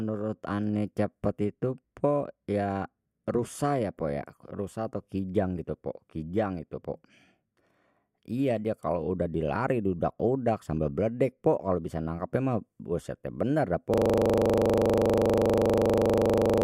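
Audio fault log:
13.94 s to end (16.64 s), system hang loop: the sound stops moving forward and one 40 ms slice repeats exactly, dozens of times, until the clip ends. The machine or its audio driver froze, but the sound hardware kept replaying the same short ring buffer. Because each slice is so brief, the repeats fuse into a steady buzz at 25 Hz, the loop rate, instead of a distinct stutter.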